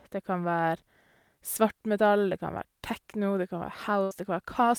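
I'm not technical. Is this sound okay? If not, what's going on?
No. Around 4.03 to 4.14 s there is a burst of packet loss: a short run of audio data never arrived in time. The receiver stretched out the last bit of speech for about 74 ms, fading it, then skipped ahead, so about 80 ms of speech is simply gone.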